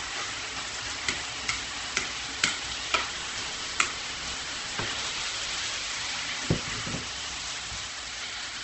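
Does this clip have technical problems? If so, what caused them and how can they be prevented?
Yes. Throughout the clip, these everyday sounds are rough and grainy, with nothing above 8.2 kHz and no swirling holes. That points to heavy Opus compression in its music mode, likely at a very low rate near 12 kbps. The encoder fills starved bands with noise instead of leaving gaps, so this differs from MP3's watery artefacts. Encoding at a higher bitrate prevents it.

From 3.09 to 5.99 s, a robotic 100 Hz buzz rides on the signal. This is buffer tearing: writer and reader cross inside every period, so about a fifth of each buffer replays audio roughly 20 ms old between hard joins. Unlike an underrun, there are no silent gaps. Keeping the write pointer safely ahead of the hardware read position prevents it.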